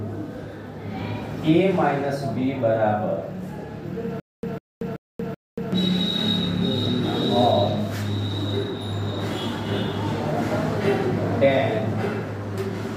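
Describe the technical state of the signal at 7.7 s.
At 7.7 s the signal plays through intact, with nothing wrong to be heard at that point.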